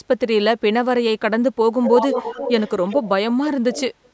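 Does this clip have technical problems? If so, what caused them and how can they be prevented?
Yes. An echo leak runs from 1.83 to 3.08 s, where a second copy of the speech trails the original by about 349 ms and is only slightly quieter. It returns briefly and much more faintly at 3.73 to 3.82 s. The likely cause is a far end playing the call through a loudspeaker, with its echo canceller failing to remove everything its microphone picked up, so that leftover was sent back down the line. Using headphones on the far end, or a device with better echo cancellation, would prevent it.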